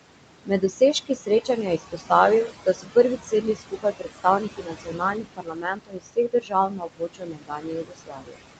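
From start to finish the noise suppressor is working hard on the room noise, pulling it down by about 20 dB in whatever frequency bands it judges to be steady noise, frame by frame. These are noise suppressor artifacts: the background drops away in the gaps and comes back up under the speech. The speech sits within a band that stops at 8 kHz, as expected for an Opus call path.

The same suppressor also mistakes parts of the speech for noise. This speech cut by the noise suppressor happens first between 0.45 and 1.49 s, where roughly half a second of sound is turned down by up to about 16 dB. It happens again from 1.78 to 2.11 s (about 11 dB) and from 2.47 to 2.96 s (about 18 dB). The worst stretch runs from 3.17 to 8.41 s, with around four seconds affected and drops of up to about 22 dB. In these passages soft consonants and word endings sound swallowed or faint.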